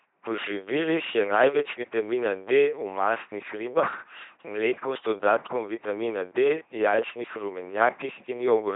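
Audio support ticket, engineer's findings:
LPC-10 vocoder, whole clip, heavy damage. Buzzy, mechanical robot speech; voicing flips produce stray buzz on hiss segments and hiss on voiced ones. Nothing above 3.8 kHz. Consistent with a 2.4 kbit/s LPC-10 path: short all-pole filter excited by pulse train or noise only. Unlike CELP-type low-rate codecs, there is no residual texture, only a hard either/or excitation.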